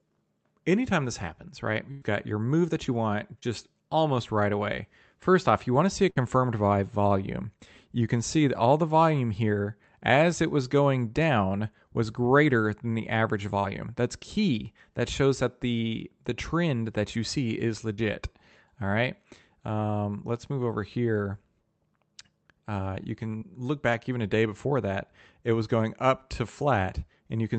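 At 1.91 to 2.03 s a burst of packet loss drops about 100 ms of speech. The receiver stretches the last sound into a fading buzz or hiss, then jumps ahead with that stretch missing. A shorter 60 ms burst at 6.10 to 6.18 s does the same.

Short concealed packet loss appears at 3.39 to 3.44 s, 13.60 to 13.66 s, 17.94 to 18.00 s and 23.38 to 23.43 s, each losing 20 to 40 ms. The decoder extrapolates the preceding sound and blends back, leaving a brief smear or wobble, with a consonant possibly lost. Throughout, the Opus call path limits the audio to about 8 kHz.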